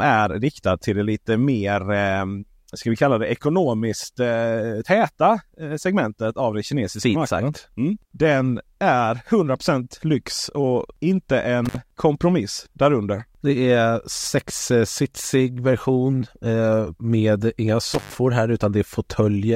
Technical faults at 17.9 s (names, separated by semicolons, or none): intermittent contact